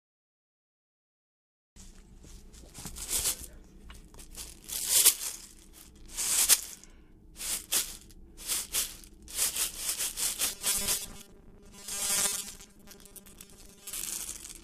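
From 10.44 s to 13.93 s, the sound turns into a rigid, metallic buzz. It is robotic sound from repeated short buffers. A fixed pitch of 200 Hz sits over the audio and ignores its natural character. The likely cause is new audio arriving too seldom. The software then fills the gaps by looping the last short chunk, which fits a 5 ms buffer. Most of the real audio in that stretch is skipped.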